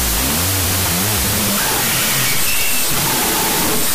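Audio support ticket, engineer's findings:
Wrong sample width, throughout: loud noise burying the signal, playing at half speed and an octave low, pointing to 32-bit float data being read as 16-bit integers.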